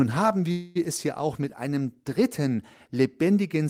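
At 0.51 s the speech stalls: the last sound is stretched into a buzzy, hissing tail that fades for about a quarter of a second, and at 0.77 s the talker picks up exactly where they left off, with nothing skipped. This is a call audio freeze. The likely cause is packets held up in transit, so the jitter buffer ran dry and the receiver padded roughly 240 ms. Everything afterwards arrives that much later.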